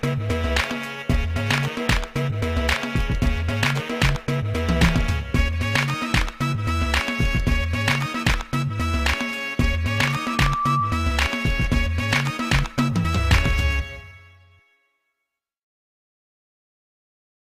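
A microphone picked up the loudspeaker it was feeding, and the loop's gain rose above one at 1.2 kHz, causing loudspeaker feedback squeal from 9.90 to 11.18 s: a single tone swells within well under a second to roughly the level of the surrounding sound.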